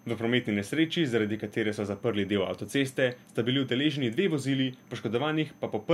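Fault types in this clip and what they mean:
Switching supply whistle: a steady high whistle sits under the speech for the whole clip, wandering slightly between about 6.16 and 6.2 kHz. Its level is low, roughly 45 dB below the speech. It points to a switching power supply running in an audible burst mode, or beating against another supply, with its small pitch drift tracking changes in load.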